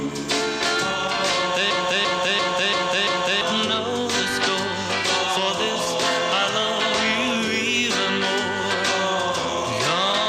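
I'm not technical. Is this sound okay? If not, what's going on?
No. From 1.71 s to 3.41 s there is a system hang loop. The computer stalled while the sound hardware kept replaying the last chunk of audio it held, a piece about 341 ms long, heard five times in a row. That gives a stuttering repeat roughly three times per second, the length pointing to a 16384-sample buffer. About a second and a half of the real audio never got through.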